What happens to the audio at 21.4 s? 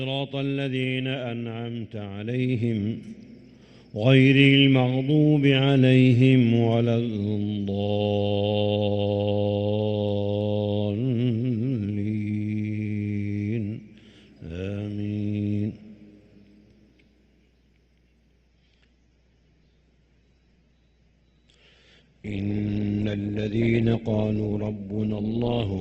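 At 21.4 s the audio sits inside an adaptive stream at a lower bitrate, a stretch running from 18.48 s to the end. The connection slowed, so the player switched to a cheaper version of the stream. The sound points to a drop from roughly 64 to 12 kbit/s. Nothing remains above 8.1 kHz, and codec artefacts thicken. Unlike a dropout or rebuffer, the quality changes abruptly with no gap or silence.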